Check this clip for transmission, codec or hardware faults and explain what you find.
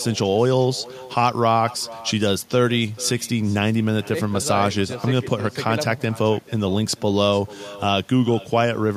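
One fault runs through the whole clip: echo with no canceller. Every phrase of the speech returns as a distinct, quieter copy roughly 0.4 s later, sitting about 20 dB below the original. The far end is playing the call through a loudspeaker, its microphone picks that sound up, and nothing subtracts it before it travels back across the network. Unlike room reverberation, which smears into a continuous decay, this arrives as a separate, thin repeat after a clear gap.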